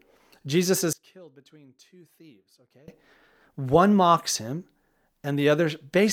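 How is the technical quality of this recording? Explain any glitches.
The recording has one clear glitch. From 0.93 to 2.88 s, a sudden gain jump drops the speech and background noise together by about 24 dB, likely an unramped digital gain change; the waveform shows an abrupt step down and back.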